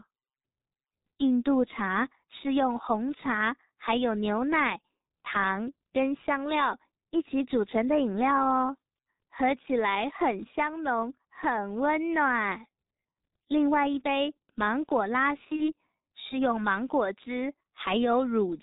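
From start to finish the speech sounds muffled and hoarse, with nothing above 4 kHz and consonants smeared so that sibilants and plosives lose their edges. This is G.723.1 codec damage, and it is heavy. The codec squeezes speech into 30 ms frames at a very low rate, consistent with its 6.3 kbit/s mode, and rebuilds the voice from a coarse model that updates only slowly. Fast spectral changes get blurred and the timbre turns rough.

At 15.56 s the voice is briefly stretched into a sound that fades, and it stays weak and distorted until about 15.73 s. This is VoIP packet loss concealed by the speech codec, and the gap fits a single lost 30 ms frame. With no data for that frame, the decoder carried its last pitch and filter forward at falling gain. Because each frame builds on the one before, the damage lingers well past the 30 ms gap.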